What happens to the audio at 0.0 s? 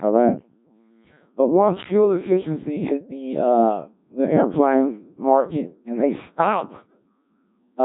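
From the first instant and throughout, the speech passes through a Codec 2 vocoder, likely at about 1.3 kbit/s. It is rebuilt from pitch and envelope as sine waves, so it sounds robotic and buzzy, with nothing above 3.8 kHz.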